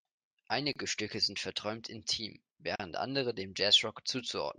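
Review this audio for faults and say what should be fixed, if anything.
Gaps at a join of encoded pieces occur at 0.73–0.76 s (27 ms) and 2.76–2.80 s (40 ms, just before "andere dem"). Separately encoded two-second pieces keep each encoder's leading delay and padded final frame, so short silences with smeared edges interrupt the speech. To prevent this, trim encoder delay and padding at each join, or encode the audio as one continuous stream.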